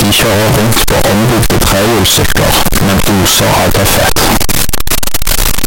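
From start to finish the speech is buried under very loud, harsh distortion, and the quiet stretches between phrases are as loud as the rest, so the level never drops. This is most likely a case of signed and unsigned mixed up in 16-bit samples. With the top bit flipped, every zero crossing in the waveform becomes a jump across the full range, which turns near-silence into a loud roar.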